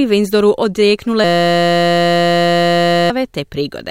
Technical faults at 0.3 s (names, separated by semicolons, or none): none